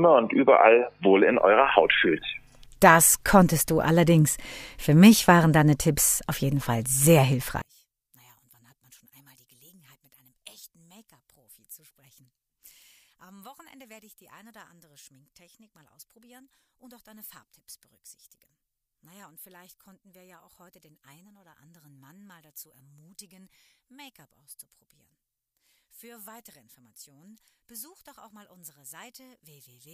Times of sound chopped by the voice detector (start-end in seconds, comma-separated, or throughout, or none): none